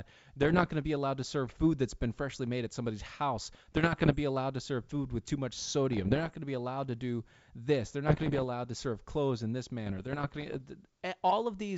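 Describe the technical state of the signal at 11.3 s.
At 11.3 s the speech is intact, carried on G.722 wideband telephone coding at 64 kbit/s.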